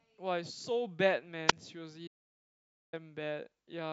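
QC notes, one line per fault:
1.47–1.53 s, wireless microphone squelch dropout. Hiss rises briefly, then the speech falls into a hole of near silence about 11 ms long. The radio signal faded, and the receiver's squelch muted the output until the carrier recovered.
2.08–2.93 s, audio dropout to silence. The speech cuts off and returns mid-flow after about 855 ms. The gap is silent with no room tone. A lost input, likely a disconnected device or failed link, left silence written. The speech in between is gone.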